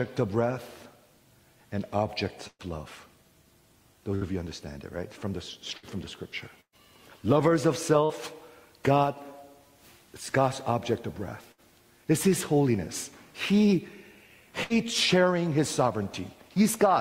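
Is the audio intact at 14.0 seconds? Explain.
Yes, the audio at 14.0 seconds is intact, with no dropout, click, distortion or other fault at that moment.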